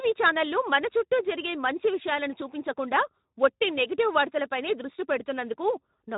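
From start to finish the speech carries plainly audible Speex codec damage. The CELP coder has too few bits for the excitation, so voices come out noisy and hoarse, which fits a low setting near 11 kbps. Nothing sounds above 3.8 kHz. A simple low-pass filter would leave the voice clean but dull, and a transform codec would smear and warble instead of sounding this hoarse.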